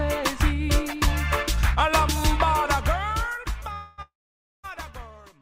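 At 3.73 to 4.00 s and again at 4.02 to 4.66 s, call audio freezes: the last sound smears into a fading buzz, going silent for about 0.53 s in the second, likely from a starved jitter buffer. Unlike a dropout, the audio resumes exactly where it stopped, just later.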